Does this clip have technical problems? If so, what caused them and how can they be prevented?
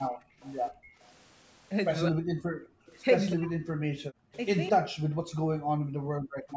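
Yes. There's background gated by the echo canceller at 0.11–0.4 s, 0.71–0.82 s, 2.68–2.87 s and 4.82–6.48 s. While the far end's loudspeaker played, the canceller clamped the mic, dropping the room sound by about 25, 27, 29 and finally 40 dB. Using comfort-noise fill instead of hard muting would smooth those holes over.

There's also an echo leak at 0.41–0.94 s and again at 2.87–3.33 s. It's a delayed copy of the speech 205 ms behind, faint the first time and noticeably louder the second. Most likely the canceller on the loudspeaker side didn't fully model the speaker-to-mic path. A headset, or a lower speaker volume, would stop it.

Speech is suppressed in double talk at 2.11–2.4 s and through 3.32–4.32 s. The voice drops away deeply, by something like 40 dB, for those stretches. That's likely because both sides spoke at once and the canceller couldn't separate its own talker from the echo. 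A canceller with proper double-talk detection would prevent it.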